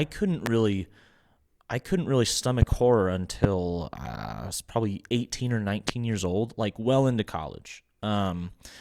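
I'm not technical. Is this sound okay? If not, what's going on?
No, there are four loud pops: at 0.46 to 0.49 s, a quick double pop at 2.62 to 2.75 s right after "I couldn't really", at 3.44 to 3.47 s, and at 5.89 to 5.91 s just before "years old like well". Each is a sudden jolt in the signal, likely from a plug, switch or static, and the speech carries on underneath.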